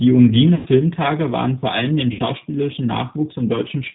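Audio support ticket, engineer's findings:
G.729 codec, whole clip. Speech band-limited, nothing above 4 kHz, with a rough, slightly synthetic edge that's plainly audible throughout. Probable component: the VoIP codec leg, and the sound fits G.729A at around 8 kbit/s. Mechanism: speech is rebuilt from a vocal tract filter, pitch predictor and a few pulses per 10 ms frame, so fine detail and air get lost.

VoIP packet loss concealed by the speech codec, 0.55 to 0.68 s. Sound smears into a buzzy, fading tone. Fits roughly 110 ms of lost 10 ms frames. The decoder extrapolates from its last pitch and filter and ramps the gain down. Second hit at 2.12 to 2.21 s, shorter, fits about 70 ms lost. Same stretched, decaying texture, with a weak, slightly off recovery afterwards while the predictor rebuilds state.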